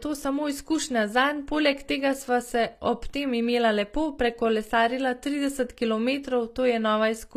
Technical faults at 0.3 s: HE-AAC compression

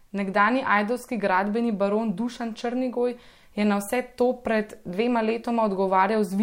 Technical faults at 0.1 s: none

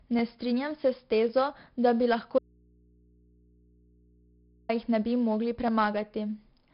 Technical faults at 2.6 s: 4-bit ADPCM compression; clock drift buffer slips; audio dropout to a faint residue

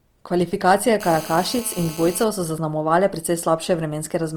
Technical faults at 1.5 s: Opus compression; GSM phone buzz

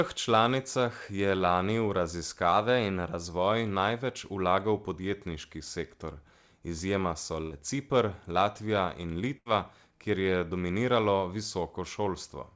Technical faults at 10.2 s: none

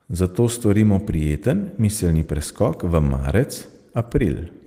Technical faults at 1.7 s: none

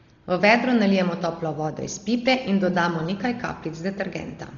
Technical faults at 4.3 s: Dolby Digital compression

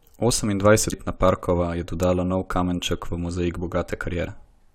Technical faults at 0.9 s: damaged data in a compressed stream

